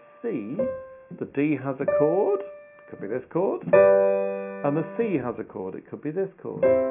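No audible technical faults.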